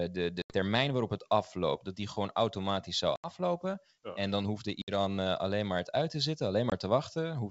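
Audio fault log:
0.42–0.55, 3.16–3.31, 4.82–4.90 and 6.70–6.73 s: packet loss on an ADPCM call. Packets went missing over the G.722 link, roughly 80, 80, 60 and 20 ms of audio, and each gap was filled with silence. This leaves abrupt holes: before "waarop het afloopt dat", after "die gewoon automatisch zou", and between "dan hoefde" and "eh alleen maar het". Because the receiver's predictor and step size drift from the sender's, speech resumes with brief distortion before settling.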